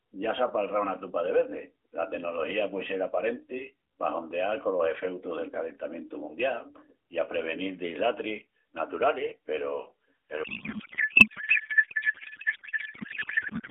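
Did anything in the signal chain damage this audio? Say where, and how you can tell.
Yes, a codec payload misread: from 10.44 s to the end, the speech becomes garbled warbling noise. The decoder is likely parsing octet-aligned AMR frames as bandwidth-efficient, shifting every field.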